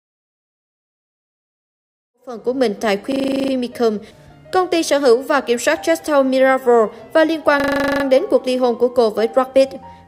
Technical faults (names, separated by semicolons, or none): system hang loop